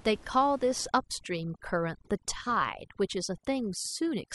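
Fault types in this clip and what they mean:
Overdone noise removal, from 0.88 s to the end: a noise reduction stage set far too aggressively pulls individual frequency bands down to almost nothing whenever their level sits close to its noise estimate. The room noise, about 24 dB below the speech, drops away and breaks up into tiny twinkling specks, and the quieter parts of the speech are cut along with it.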